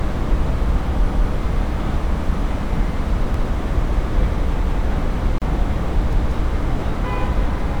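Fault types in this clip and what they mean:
Repeated buffer: A stutter where a chunk of about 186 ms plays twice with a hard join, at 1.12, 3.34, 4.64 and 6.13 s. Fresh audio arrived late, so the device replayed its last block, which fits an 8192-sample buffer. Nothing is skipped afterwards.
Gap at a join of encoded pieces: A brief dropout of about 34 ms at 5.38 s, with smeared edges, after which the sound resumes where it stopped. Separately encoded pieces were spliced untrimmed, leaving encoder start delay and end padding as silence.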